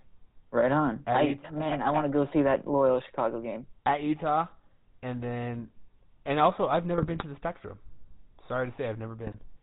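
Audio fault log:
Throughout: GSM full-rate codec. The speech was squeezed through a vocal-tract model driven by a coarse pulse excitation, which fits the 13 kbps full-rate scheme. Nothing passes above 4 kHz, leaving plainly audible dull band-limiting and a buzzy, gravelly roughness on the voice.
6.97–7.24 s and 9.26–9.39 s: GSM bit errors. Corrupted bits reached the decoder and scrambled its filter, pitch or gain values frame after frame while each bad patch lasted. The voice breaks into squawks, pops and gargling, with the first burst lasting longer.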